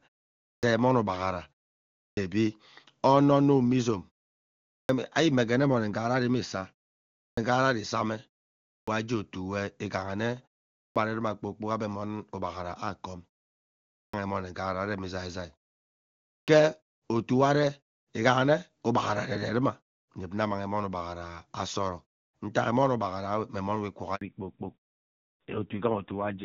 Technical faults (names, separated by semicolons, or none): clipped start after a pause; handover gap; fallback to narrowband